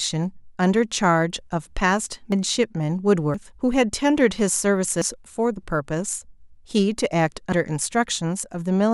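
At 2.32, 3.34, 5.02 and 7.52 s the speech jumps ahead by about a tenth of a second with no silent gap, which likely points to a dropped buffer (overrun) rather than a dropout.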